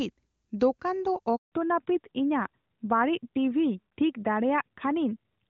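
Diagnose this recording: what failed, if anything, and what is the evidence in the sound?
Handover gap at 1.36 to 1.52 s, a network-stage failure. The speech fades out within a few tens of milliseconds and stays silent for 160 ms while the call switches networks. No speech frames reach the receiver in that interval, so whatever was said there is lost.

Fallback to narrowband from 1.52 s to the end, a codec-stage change. Before the gap, the AMR wideband (HD Voice) codec carries clean speech. Afterwards nothing remains above 4 kHz and the voice sounds duller and rougher, which fits a drop to AMR-NB at 12.2 kbit/s.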